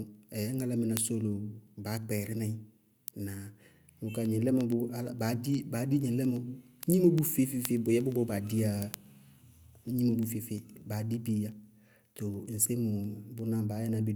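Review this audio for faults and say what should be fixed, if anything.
Word clock ticks run through the speech from 0.15 s to 14.1 s: sharp clicks of uneven strength, about ten per second, around a hundred in all. The receiving device is free-running against its source, with a clock error on the order of 200 ppm, so every time the two clocks slip a full sample, one sample is dropped or repeated and the neighbouring samples are misread. On a spectrogram these show as evenly spaced thin vertical lines across the whole band; on a zoomed waveform, as single-sample discontinuities at a regular interval. Prevent it by locking the receiving device to the incoming digital signal or to a shared word clock, or by passing the stream through a sample-rate converter.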